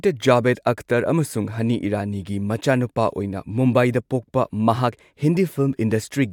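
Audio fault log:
No faults detected in this speech recording.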